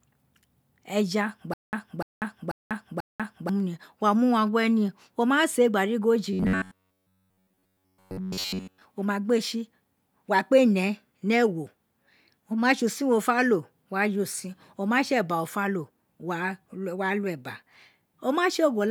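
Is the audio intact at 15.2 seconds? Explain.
Yes, the speech at 15.2 seconds plays through cleanly, with no dropout, click, distortion or other fault at that moment.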